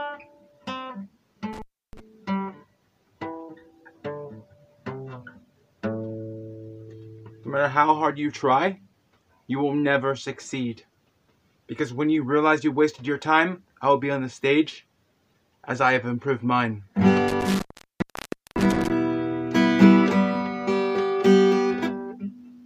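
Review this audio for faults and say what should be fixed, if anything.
Two dropouts from an intermittent contact need fixing. The first falls between 1.53 and 2.00 s, with the line open for 0.31 s. The second runs from 17.28 to 18.90 s, open for 0.94 s. Each time a loose connector or cable conductor briefly loses contact, the signal path breaks. The sound cuts out, leaving faint hiss, and crackle marks the edges as the contact opens and closes. To prevent it, reseat or replace the suspect cable and plugs and add strain relief so the connection cannot shift.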